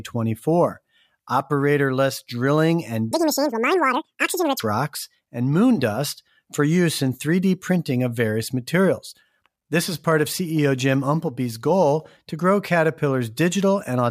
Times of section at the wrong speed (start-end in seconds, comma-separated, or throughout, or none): 3.11-4.60